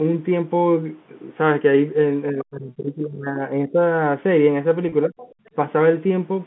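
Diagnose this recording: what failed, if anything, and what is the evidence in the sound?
Speech suppressed in double talk, call processing: from 2.32 to 3.82 s the speech sinks, by about 25 dB at its deepest, and again briefly at 5.07 to 5.14 s, by about 15 dB. The likely cause is an echo canceller that could not separate the talker from loudspeaker echo, so it attenuated both.

Other side's voice leaking through, call processing: at 2.39 to 2.44 s a brief scrap of a second voice appears, roughly 25 dB below the talker. The likely cause is residual loudspeaker echo that the echo canceller failed to remove from the microphone signal.

Packet loss with pitch repetition, network: at 4.89 s a 30 ms gap is bridged by a repeated pitch period, giving a short held, buzzy tone, which fits three lost 10 ms packets. The receiver's concealment filled the hole instead of leaving silence.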